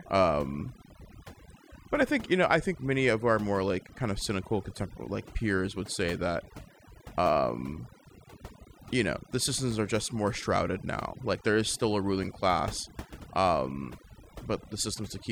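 Overdone noise removal runs through the whole speech clip. The reduction is set too aggressively, so frequency bands near the estimated noise floor are pulled down or gated off, taking quieter voice components with them. Pauses drop to near silence with twinkling specks.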